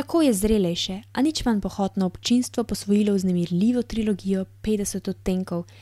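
Nothing goes wrong anywhere in this recording; there's no technical fault to point to at any moment.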